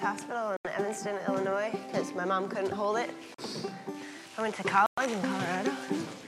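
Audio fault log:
0.57–0.68 s, 3.34–3.41 s, 4.86–5.01 s: Bluetooth stall. The sound cuts to silence for 80, 40 and 113 ms, then resumes, likely because the headphone buffer ran dry while delayed packets were resent. The waveform shows flat silent gaps, and the spectrogram shows empty vertical bands across all frequencies.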